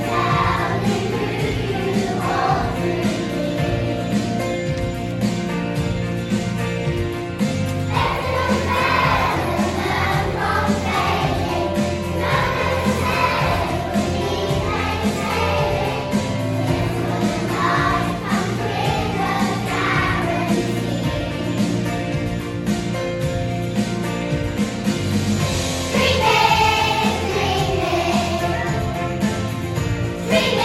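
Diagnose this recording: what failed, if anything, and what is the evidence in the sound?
Nothing failed, and the sound gives no evidence of any fault.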